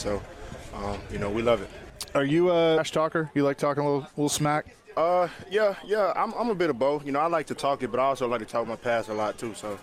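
Damaged data in a compressed stream shows up twice: a brief blip at 0.54 s and another from 2.77 to 2.79 s, each about 20 ms long. At both points part of the compressed data is wrong, so the decoder misreads or rejects the frames there, loses its place in the stream, and has to search for the next valid frame header before decoding resumes. Each break is heard as a short chirp, squawk, click or hole.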